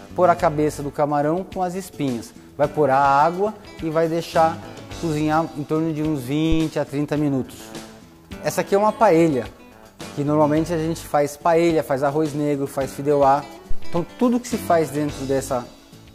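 Two phantom power thumps occur, at 6.52 s and 13.71 s. Each is a supply switching on or off on a live input, its voltage step passing through the coupling capacitors as a deep thump peaking near -9 dBFS. The first dies in about 22 ms, the second in about 98 ms.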